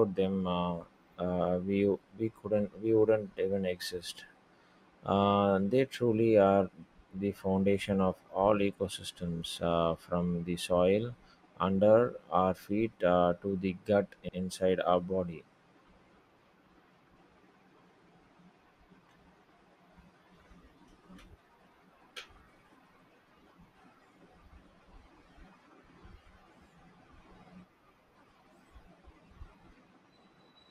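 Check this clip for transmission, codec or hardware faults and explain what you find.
Repeated frames occur twice in this speech. At 9.36 to 9.41 s, a single 24 ms block was replayed two extra times, and at 14.28 to 14.38 s, a 96 ms stretch, consistent with a short run of frames, played once more. The decoder re-outputs identical audio, causing a brief stutter and lengthening the clip by 48 ms and 96 ms.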